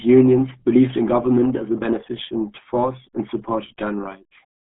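From start to finish the speech carries the signature of the RealAudio 14.4 codec, and the damage is heavy. The band sits roughly between 150 Hz and 3.4 kHz, with nothing at all above 3.7 kHz, so everything sounds boxed-in and muffled. On top of that there's a gargly, smeared quality where the coder is guessing at the signal with very few bits, which fits a starved 8 kbit/s stream built for dial-up modems.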